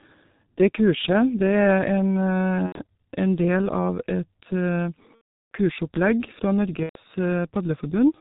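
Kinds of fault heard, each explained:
G.723.1 codec: The whole recording passed through a low-rate telephony coder working in 30 ms frames, heavily degrading it. Nothing above 4 kHz survives, and the slowly updated voice model leaves speech muffled and hoarse with smeared consonants, which fits a rate near 6 kbit/s.
VoIP packet loss concealed by the speech codec: Packets went missing, and the decoder filled each gap by extending its last pitch and filter at falling gain. Speech smears into a fading buzzy tone or coloured noise at 2.66 s just before "en del av", at 5.15 s for about 0.4 s, and at 6.83 s.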